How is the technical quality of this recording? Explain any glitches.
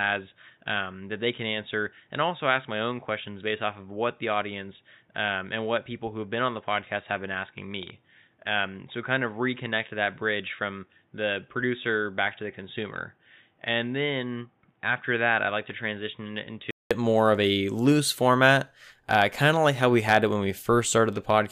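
Technical quality is compromised for most of the recording. From 0 to 16.91 s the speech sounds dull and boxy, with nothing above 3.8 kHz, slightly quieter, and carrying faint background noise. Then a 200 ms silence falls and it opens up at "more of a loose". That is an input switched to a poorer device, likely a narrowband headset profile or weaker microphone.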